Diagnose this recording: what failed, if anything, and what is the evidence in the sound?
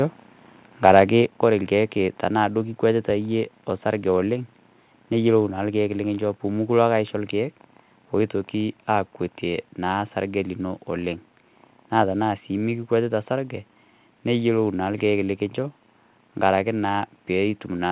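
Microphone overload, 0.84 to 1.02 s: the loudest syllables in this stretch of speech take on a harsh, crackling edge, with peaks flattened about 5 dB past full scale and roughly 3 percent of samples clipped. The stage is the converter input, and the likely cause is microphone gain set too high, so waveform tops were sliced off at the converter ceiling. The added distortion sits inside the narrow band of the call path, which carries nothing above 4 kHz.

Microphone volume stepped down, at 1.26 s and again at 5.46 s: speech and background fall together in abrupt steps, about 4 dB and then about 2 dB, with no fade. This points to call processing and not the acoustics. The first step arrives a quarter second after the distorted peak, so it is likely the call software's gain control reacting to the overload by cutting the device's input level in discrete increments.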